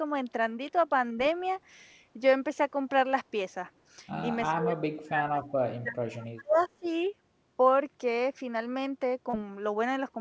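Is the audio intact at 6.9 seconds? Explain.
No. From 5.64 to 6.85 s the sound dips deeply, by around 35 dB, for roughly a second. This is likely speech suppressed in double talk, where the canceller ducks the wanted speech along with the echo. Right after, at 6.84 to 6.89 s, a faint echo leak appears: a short scrap of the audio repeating 339 ms late at about 35 dB below the speech. Unlike the suppression, which removes sound, the echo leak adds a delayed copy, likely because the far end's canceller did not fully remove its loudspeaker pickup.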